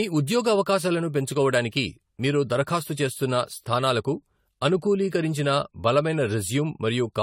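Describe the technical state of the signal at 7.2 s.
At 7.2 s you're still hearing the generation loss that runs through the whole speech clip. The swirly, hollow smear and the softened consonant attacks sound like audio that has likely gone through AAC-LC around five times, with a coding rate near 64 kbit/s. Each re-encode quantises on a shifted frame grid, so the noise and spectral holes pile up. There's nothing above 19.3 kHz.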